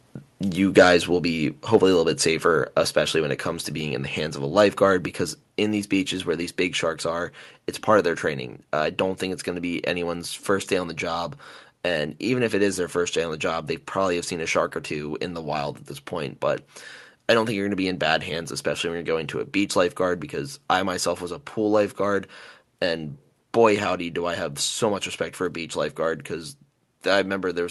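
Microphone volume stepped down at 1.17 s and again at 5.49 s, between "of a lifeguard because" and "in these beaches where", in this speech clip: the level drops suddenly by about 2 dB, most likely because the call software lowered the device's input volume in one step.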